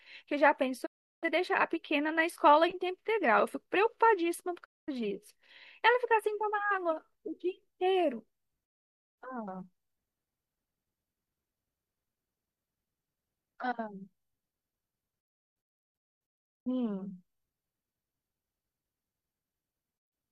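Speech with repeated digital broadcast dropouts, where the receiver stopped getting valid frames and muted until clean ones returned. The sound fades out over about 20 ms and the audio in each hole is gone: 0.85 to 1.25 s, 4.64 to 4.89 s, 8.65 to 9.19 s, then a cluster of short holes from 15.20 to 16.68 s totalling about 1.03 s, none longer than 0.22 s, and brief gaps from 19.97 to 20.13 s.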